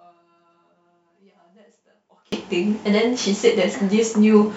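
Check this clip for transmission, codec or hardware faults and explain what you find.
One fault is present, in the first part of the clip. From 0.0 to 2.32 s the speech drops by about 33 dB, leaving only a faint residue before it returns at full level. The likely cause is one channel inverted: with one stereo channel's polarity reversed, the material common to both channels cancels when they are summed to mono. Centred speech and its low end nearly disappear, so only the small difference between channels remains audible.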